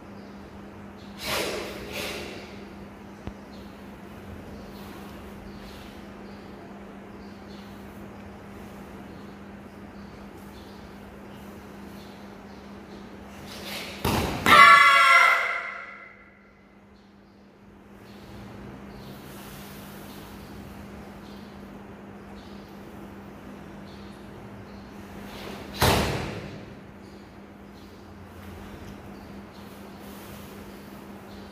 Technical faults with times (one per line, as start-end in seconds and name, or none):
none